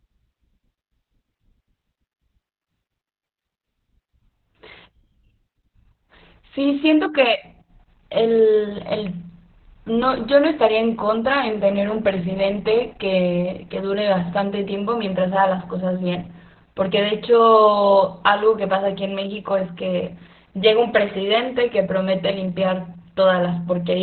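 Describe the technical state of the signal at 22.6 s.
At 22.6 s you're hearing the same Opus voice compression that runs through the whole clip. The speech has been squeezed into narrowband, so nothing gets through above about 4.2 kHz. That's why it sounds muffled, like an old phone line. The excitation is coded coarsely, giving the voice a hoarse, slightly robotic grain. That's heavy damage, and it fits SILK running at a very low rate, around 8 kbps.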